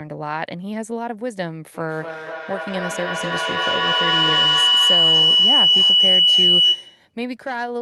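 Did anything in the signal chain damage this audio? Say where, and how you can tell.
Yes: feedback howl, 1.74 to 7.14 s. A tone near 3 kHz, repeating about every 200 ms, grows each loudspeaker-to-microphone pass to about 10 dB above the speech.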